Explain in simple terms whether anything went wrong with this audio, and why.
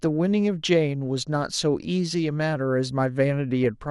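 MP2 compression throughout: the speech sounds dull and gurgly, likely because the encoder had too few bits and switched off upper frequency bands.

DAB burbling at 3.64 s: a brief glitch where reception errors corrupted the digital audio data, putting short blips of noise into single frequency bands.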